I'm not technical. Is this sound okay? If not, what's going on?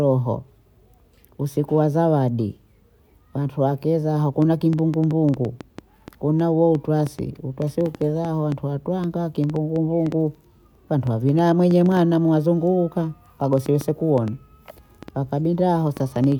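No. Right after "wantu wakeza", at about 4.42 s, a train of clicks starts and runs to 16.33 s: around 50 similar pops, about four a second at an uneven pace, even in pauses. Likely interference or a faulty connection or power supply.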